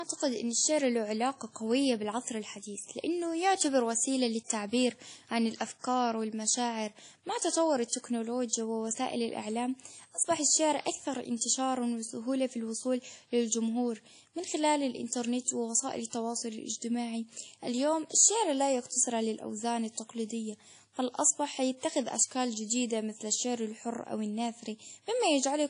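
From start to finish the speech carries a ringing, washy quality, with a hiss that swells and fades along with the voice and smears around each syllable, and nothing is heard above about 10.1 kHz. This is likely WMA compression at a low bitrate, consistent with roughly 32 kbps. Its long transform blocks spread quantisation noise over tens of milliseconds, and too few bits remain to keep weak spectral lines or the top octave.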